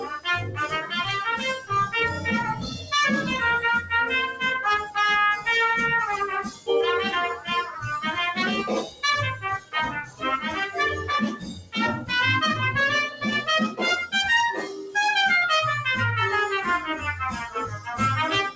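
Right from the start there's a noise suppressor applied to music or sounds, a speech-tuned one left running. It treats held tones and ambience as noise, so levels swing by around 10 dB and the sound pumps and thins, all within a top end that stops at 8 kHz, which fits a wideband call codec.

The sound cut by the noise suppressor shows up in stretches: 0 to 5.46 s (about 16 dB down at worst, roughly one and a half seconds affected), 6.43 to 7.84 s (about 13 dB), 8.83 to 12.1 s (about 17 dB), 13.1 to 14.95 s (about 11 dB), and 17.48 s to the end (about 16 dB). Sustains and tails sink while attacks poke through.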